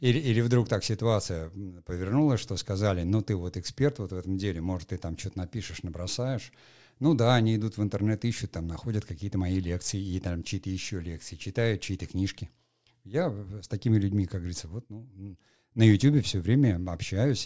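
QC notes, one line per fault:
No faults to note in this speech clip.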